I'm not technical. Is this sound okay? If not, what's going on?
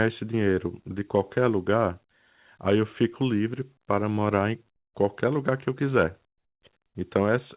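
No, there's comfort noise in place of the background at 6.38 to 6.62 s and 6.86 to 6.95 s: the room sound drops to a quieter, flat hiss, likely the call filling pauses with fake noise.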